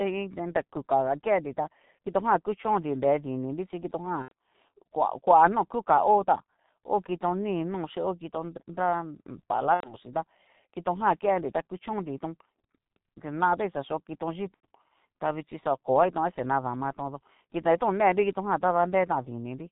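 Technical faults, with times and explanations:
Throughout, G.723.1 codec: the speech is carried at a rate that fits 6.3 kbit/s in 30 ms frames, and the damage is heavy. Nothing above 4 kHz survives, so the voice is dull and muffled. The codec's slowly updated vocal model can't follow quick changes in the mouth, which leaves a hoarse, rough texture and smears consonants into one another, so plosives and fricatives lose their edges and syllable boundaries blur.
4.22–4.32 s, 9.75–9.96 s and 14.54–14.66 s, VoIP packet loss concealed by the speech codec: each gap matches about 90 ms of missing audio. The first comes right after "kuchonnri nre dininrí chí". The decoder fills each hole by repeating its last pitch and filter at falling gain, so the speech turns into a buzzy tone or coloured noise that fades. Because every frame builds on the one before, the voice stays weak or distorted for a while after real audio resumes.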